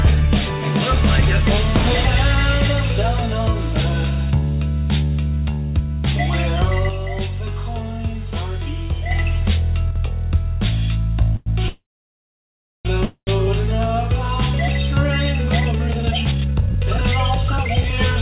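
From 6.89 to 9.11 s, the level drops abruptly by about 6 dB and then returns. A second drop of about 6 dB follows from 9.91 to 9.96 s. This is one channel dropping out. The likely cause is a stereo channel being lost while both channels carried the same sound, which halves the mono sum.

Three call audio freezes come next. The first runs from 11.36 to 11.48 s, the second from 11.68 to 12.87 s, and the third from 13.05 to 13.29 s. In each, the last sound continues as a fading buzz or hiss. The long freeze falls silent for about 1 s, and the third for 80 ms. The audio then resumes where it stopped, with nothing lost. The likely cause is delayed packets emptying the jitter buffer.

From 15.49 to 18.12 s, a jitter buffer speed-up plays the sound at about 136% speed with unchanged pitch. It sounds hurried. The receiver cut roughly a second of audio in short pitch-period pieces to shrink the buffer. 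Throughout the clip, the call path passes nothing above 4 kHz, which fits a narrowband codec such as G.711.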